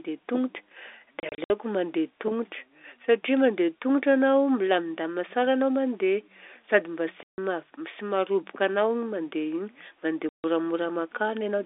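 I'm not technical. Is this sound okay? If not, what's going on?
No. The speech drops out in short bursts of packet loss filled with silence: chopped gaps just before "mandeha tongotra" (1.2 to 1.5 s), after "sady mba" (7.23 to 7.38 s), and at 10.29 to 10.44 s. Bits went missing in transit, and the gaps became dead silence with hard edges rather than being smoothed over.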